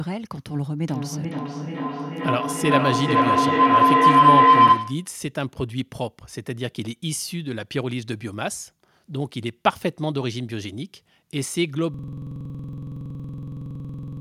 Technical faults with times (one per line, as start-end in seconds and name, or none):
0.85-5.16 feedback howl
11.94-14.21 system hang loop